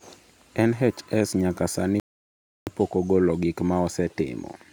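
At 2.00 s, after "nyaka sani", the speech drops into silence and resumes at 2.67 s with "pok ogolo gik". That's a rebuffering stall: playback ran dry and waited 0.67 s for data, losing nothing.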